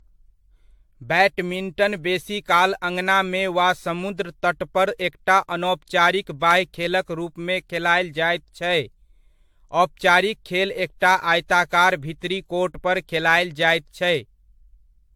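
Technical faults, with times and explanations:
Throughout, generation loss: swirly, smeared, hollow speech with blurred attacks. This is likely from about seven repeated lossy encodes, which fits 96 kbit/s AAC. Nothing above 19.1 kHz.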